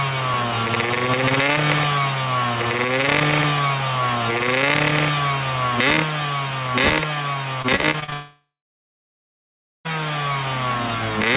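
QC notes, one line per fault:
7.62–8.14 s, repeated packet loss (robotic sound): Choppy stutter with small bits missing. Seven short gaps, the longest 40 ms, were each filled by stretching the preceding sound, so about a third of this half-second is synthetic patching rather than real audio.
8.14–9.87 s, long network dropout: A brief fading buzz or hiss, then about 1.4 s of silence before the sound resumes further on, with roughly 1.7 s gone. This is likely a network outage, where the receiver extended the last sound, gave up, and went quiet until packets returned.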